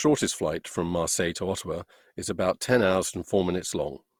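Speech with generation loss throughout: swirly, hollow and smeared, with blurred consonant attacks, likely from about seven lossy re-encodes, fitting a 64 kbit/s Opus chain. A spectrogram shows built-up noise, with nothing above 20.3 kHz.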